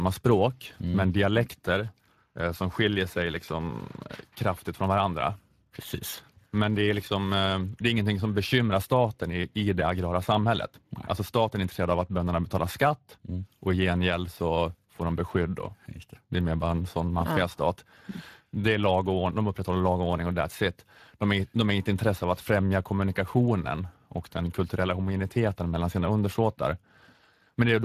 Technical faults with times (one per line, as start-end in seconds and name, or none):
0.00-27.85 Speex codec